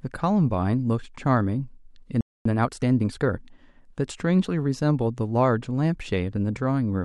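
At 2.21 s the player likely ran short of data, a playback stall: the speech cuts to silence for about 0.25 s before resuming at 2.45 s. From 2.45 to 3.43 s a time-compressed catch-up trims the backlog by splicing out small fragments, so the speech runs about 1.25 times fast at normal pitch.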